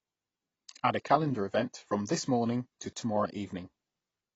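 From start to finish the speech stops at 7.8 kHz and sounds dull and plainly smeared, with a fizzy texture on sibilants. The likely cause is AAC compression at a rate fitting about 24 kbps, where the encoder discards the upper band and coarsely quantises the rest.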